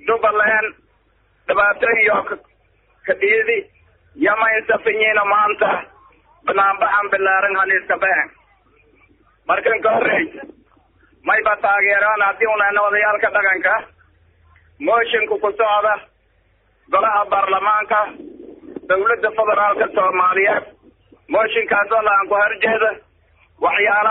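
No technical faults are audible.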